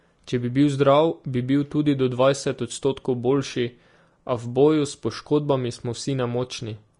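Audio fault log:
Throughout, Vorbis compression: the speech has a hissy, grainy texture, with consonant attacks smeared and the tone roughened. Nothing is present above 10.6 kHz. The likely cause is low-quality Vorbis coding, consistent with a bitrate near 35 kbps. The codec lowered its upper cut-off and quantised the remaining treble so coarsely that fine detail became noise of similar energy, producing the audible grain and the blurred onsets.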